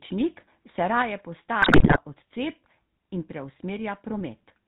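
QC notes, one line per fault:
throughout: GSM full-rate codec. The whole clip sits inside a band that stops at 4 kHz, with a steady buzzy, gravelly grain on the speech. It fits the 13 kbps GSM full-rate coder, which models the vocal tract and feeds it a sparse, regularly spaced pulse train, so fine detail in the excitation is lost. Unlike transmission damage, this roughness is constant and even. It never flares into bursts, and the level stays steady.
0.98–1.02 s: microphone overload. For about 40 ms the loudest peak gets a harsh, crackling edge. The likely cause is the input level driving the converter about 2 dB past its limit, so the tops of the waveform are sheared off on a small fraction of samples. This is distortion that rides on a loud peak. The spectrum keeps its shape and the level doesn't jump, which separates it from the bit-error bursts later.
1.02 s: microphone volume stepped down. 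Right after the clipped peak, the speech and the background noise beneath it drop together by about 5 dB in one instant step. The likely cause is the call software reacting to the overload by cutting the device's input gain. The change is a clean step with no ramp, and because the background drops too, it can't be the talker simply speaking more quietly.
1.62–1.97 s: GSM bit errors. For about 0.35 s the speech breaks into squawks, pops and a gargling texture. The sound points to a heavy error rate on a weak link, with a run of consecutive coded frames corrupted before decoding. Flipped filter values bend the spectrum and flipped gain values make the level jump frame by frame. The sudden, erratic tonal and level changes set it apart from the steady codec buzz and the single clipped peak.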